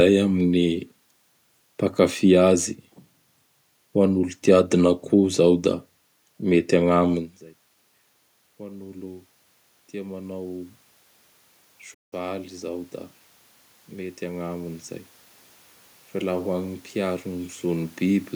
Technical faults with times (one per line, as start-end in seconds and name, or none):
11.94-12.13 playback stall